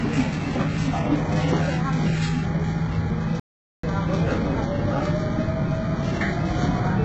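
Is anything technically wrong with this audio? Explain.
Yes, there are three separate problems in this clip of everyday sounds.

First, a mains buzz runs the whole way through, sitting roughly 20 dB below the sound itself. It's built on 50 Hz, but it isn't a smooth hum. Something like a dimmer, a rectifier or a missing shield is letting sharp switching spikes into the signal twice per mains cycle. Those spikes spread harmonics of 50 Hz well up into the kilohertz range, so you get a steady, raspy buzz underneath everything.

Second, there's heavy codec damage, and it sounds like HE-AAC compression, likely at a very low bitrate, somewhere around 8 kbps. HE-AAC only properly codes the lower band. The treble is rebuilt by copying lower bands upward and shaping them with a coarse envelope. The top end keeps some brightness, but it isn't the real thing, and the harmonics don't line up where the copied part starts. 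That gives the sound a gritty, metallic edge.

Third, a playback stall cuts the audio dead from 3.40 to 3.83 s, a gap of about 0.44 s. The sound stops mid-flow and then carries on. The likely cause is the player running out of data, or its thread getting blocked, so the output stays silent until it catches up.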